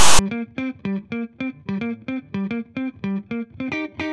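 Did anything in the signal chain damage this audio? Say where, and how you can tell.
Yes. The clip opens with a harsh, hard-edged rasp of static from 0.0 to 0.19 s, lopsided rather than centred. This is file tags played as audio: at the storage and playback stage, a block of text metadata was read as sample values, and text bytes produce that offset rasp.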